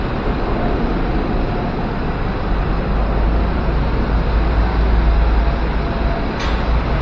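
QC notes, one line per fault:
No fault to note.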